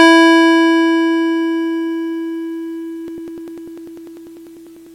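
From 3.08 s to 4.87 s the music carries periodic USB or driver dropouts: every 0.099 s, about a millisecond of audio is skipped, giving about twenty evenly spaced ticks. Their strict ten-per-second rhythm, audible only under signal, sets them apart from random clicks.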